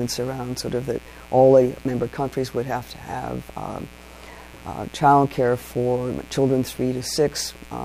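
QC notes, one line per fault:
Throughout, mains buzz: a steady, raspy buzz sits roughly 25 dB under the sound, built on 60 Hz. Sharp switching spikes, two per mains cycle from a dimmer, rectifier or unshielded lead, spread harmonics of 60 Hz up into the kilohertz range.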